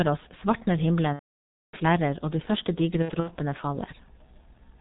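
From the start this speech runs through the G.723.1 codec, and it's heavily damaged. The sound points to the higher-rate mode at around 6.3 kbit/s, with coarse 30 ms frames. Nothing gets through above 4 kHz, so the whole thing is muffled. Because the codec's model of the vocal tract only updates frame by frame, the voice comes out hoarse and the consonants smear into each other.

At 1.13 s, right after "oss svartner", there's VoIP packet loss concealed by the speech codec, running to about 1.75 s. That gap is roughly 600 ms, which fits around twenty missing 30 ms frames. The decoder keeps repeating its last pitch and filter and turns the gain down each frame, so you hear a stretched sound fading out, then muted from the third lost frame on. It stays weak for a moment after the audio comes back on "flerrer og de første".

Later, after "flerrer og de første", it happens again between 3.02 and 3.30 s. 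This time it's scattered: about 120 ms lost across a 240 ms stretch, with the longest hole at 60 ms. You get short stretched smears and dips instead of one long fade.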